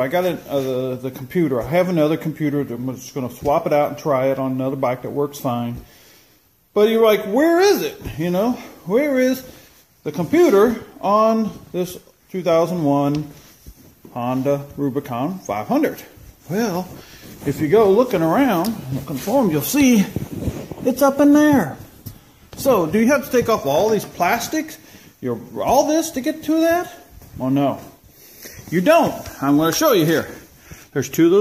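No technical faults can be heard in this recording.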